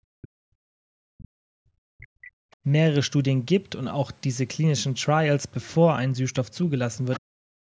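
Speech recorded through call microphone processing, with nothing above 8 kHz, and it shows speech suppressed in double talk right from the start to 2.07 s, again briefly at 2.23 to 2.3 s, and from 7.24 s to the end, with drops of up to roughly 40 dB. The likely cause is the echo canceller failing to separate the talker from loudspeaker echo while both sides spoke, so it turned everything down. There's also the other side's voice leaking through in short scraps at 2.01 to 2.07 s and 2.51 to 2.56 s, sitting quite low, roughly 30 to 35 dB under the speech, then more plainly at 7.13 to 7.2 s, only about 15 dB down. That's likely residual far-end audio from the loudspeaker that the echo canceller didn't fully remove from the mic.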